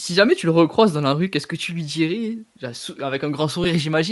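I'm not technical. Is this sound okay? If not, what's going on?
No. Throughout the recording the speech has a breathy, grainy edge, with the crisp upper sounds replaced by hiss. This is most likely Bluetooth LC3 compression, the squeezing that Bluetooth LE Audio earbuds and headsets apply to save wireless bandwidth. To fit the data into the link, the codec throws away much of the fine high-pitched detail and fills the gap with noise. The damage is plainly audible here, even to a casual listener.

At about 3.64 s there is a very brief blip where the sound turns smeary for an instant. That is a lost LE Audio frame. One tiny slice of audio, roughly a hundredth of a second and consistent with a single 10 ms frame, never arrived over the wireless link. The receiving device covered the hole by reusing the previous slice with its detail scrambled, which is why you hear a short noisy smudge rather than a clean gap.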